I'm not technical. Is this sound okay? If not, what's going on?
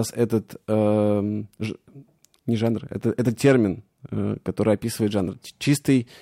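Yes, this sound is okay, and nothing is going wrong in it.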